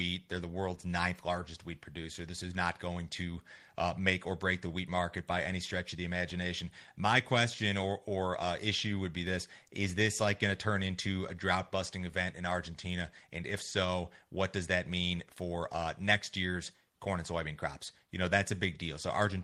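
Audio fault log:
No faults found in this speech recording.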